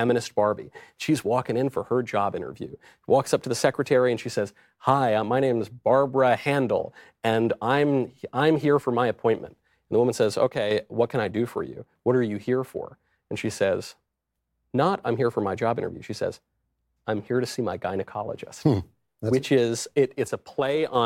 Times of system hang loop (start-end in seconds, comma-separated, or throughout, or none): none